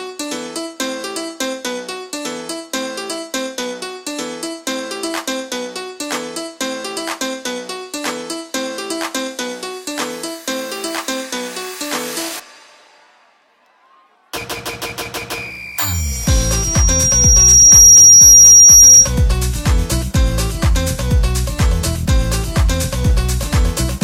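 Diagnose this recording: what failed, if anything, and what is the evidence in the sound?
Loudspeaker feedback squeal at playback: from 15.94 to 19.13 s a 5.7 kHz tone swells up, because the mic hears its own speaker above unity loop gain.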